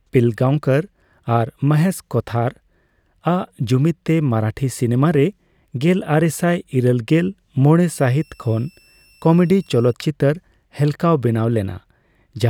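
A switching power supply in the recording chain slips into an audible operating mode from 7.93 s to 9.93 s. For those two seconds a switching supply whistle sits under the speech: a thin, high tone near 3 kHz, wandering between about 2.66 kHz and 2.8 kHz as the supply's load shifts. It stays quiet, roughly 35 dB below the speech, but its pitch stands apart from the speech.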